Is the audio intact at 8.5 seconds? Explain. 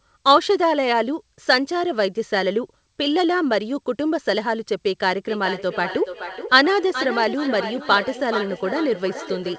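No. At 8.5 s the clip is inside a feedback echo between two devices, running from 5.2 s to the end at 9.58 s. A second device in the room replays the call, and this microphone recaptures it, beyond its own echo canceller's reach. Each phrase returns about every 0.4 s, thinner and ringing, peaking around 10 dB below the speech. A spectrogram shows fainter repeated copies of each syllable at that regular spacing.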